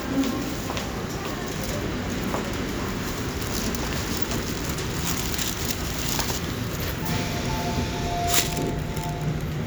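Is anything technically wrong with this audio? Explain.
No, nothing technically wrong turns up here; these sounds come through without any fault worth pointing out.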